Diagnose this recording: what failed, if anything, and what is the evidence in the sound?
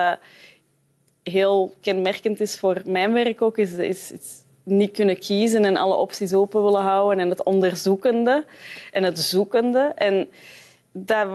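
Gain pumping at the processing stage: the level swings about 5 dB, pulled down under loud sounds, with loud and soft parts squashed closer in level. Likely a limiter taming excessive input gain.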